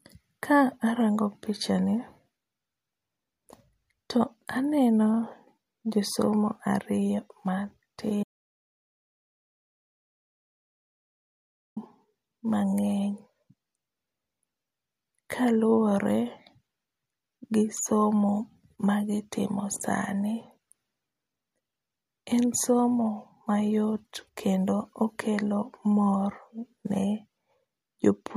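An audio dropout to silence runs from 8.24 s to 11.76 s, cutting the speech off mid-flow for about 3.5 s. The gap is silent, with no room tone or background noise beneath it, and the speech resumes abruptly at the far edge. That pattern points to the input signal being lost while recording continued, most likely through a disconnected device, a failed link or a stray mute, so whatever was said during that stretch is missing.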